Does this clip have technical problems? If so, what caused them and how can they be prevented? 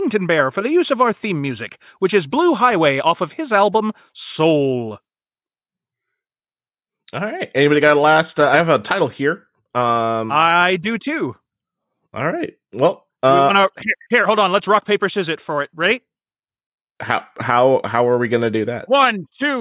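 No, there are no technical problems to hear in this clip. With no faults present, there is nothing here that needs preventing.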